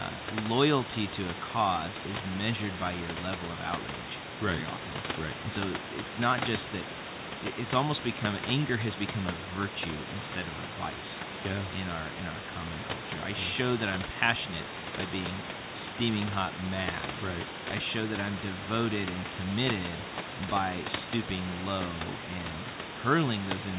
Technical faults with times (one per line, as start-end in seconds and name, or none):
none